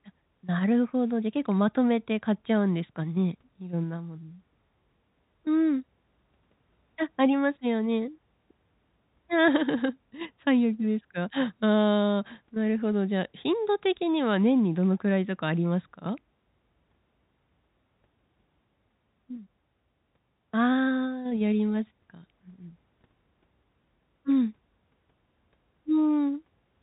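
No technical faults turn up anywhere in this speech clip. It carries the narrow band of G.711 telephone coding, with nothing above about 3.8 kHz.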